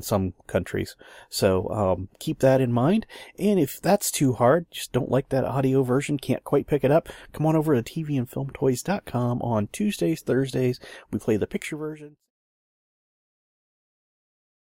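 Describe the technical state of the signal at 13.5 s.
At 13.5 s the signal is intact, with no fault present at that moment.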